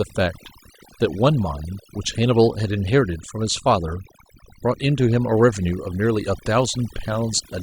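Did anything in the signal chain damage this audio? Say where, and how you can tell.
Yes. The damage sits in call processing, where overdone noise removal runs through the whole speech clip. Between phrases the background drops to near silence flecked with twinkling specks. The suppressor judged individual frequency bands against its noise estimate and shut them down, taking quiet voice detail along with the noise. A low bitrate codec smears sound into swirly tonal artefacts even when nothing else is present. Here the gaps go almost silent, which points to over-aggressive noise removal.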